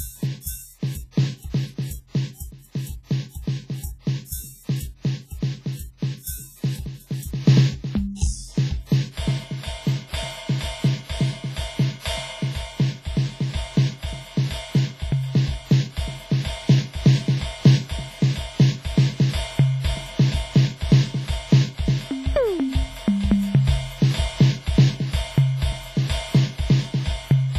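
Throughout the music there is a ringing, washy quality with a hiss that swells and fades with the level, and nothing is heard above 15.4 kHz. This is heavy damage from WMA compression, likely at a low bitrate around 24 kbps. Long transform blocks spread the coarse quantisation noise across tens of milliseconds, and weak spectral lines drop out entirely. Unlike broadband tape hiss, this noise breathes with the music rather than sitting at a steady floor.

Pre-echo appears before sharp attacks at 0.41 s, 3.29 s, 8.14 s and 9.12 s. Each time, a short hiss leads the hit by about 49, 53, 59 and 54 ms respectively, and the attack itself sounds softened. The cause is an attack landing late in a transform block, so noise sized for the loud onset also fills the quiet gap just before it. Room reverb trails after a sound, but this smear arrives ahead of the transient.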